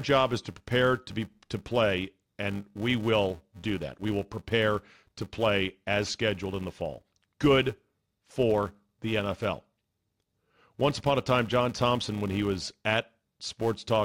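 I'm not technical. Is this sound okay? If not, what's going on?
No. Throughout the clip, a filter is restarted on every block. The processing works through the audio in short chunks, and the filter forgets where it left off each time, starting every chunk from silence. That leaves a tiny click at the start of each chunk, repeating about 345 times a second, which fits a 128-sample block. Together the clicks form a steady buzz under the speech that gets louder and quieter along with the speech.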